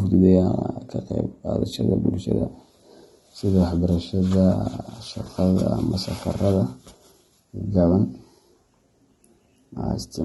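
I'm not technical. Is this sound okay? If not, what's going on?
No. The speech sounds dull and smeared throughout, with a fizzy, warbling edge on hissy sounds and nothing above about 11.6 kHz. That points to AAC compression, likely squeezed hard to save space, which discards fine detail and treble.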